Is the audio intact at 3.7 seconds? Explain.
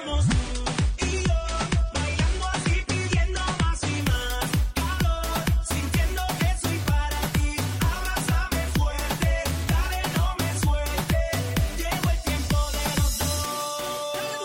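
No. At 3.7 seconds the audio is still inside the opening stretch of an adaptive stream starting at a low bitrate, which runs from 0.0 to 4.0 s. The player begins on a cheap, fast-loading version and only switches to a better one after measuring the connection. Until then the sound is dull, with nothing above 9.7 kHz and coarser codec smearing, which fits roughly 32 kbit/s AAC-LC. A spectrogram shows a flat ceiling at 9.7 kHz that lifts abruptly at 4.0 s, with no gap in the waveform.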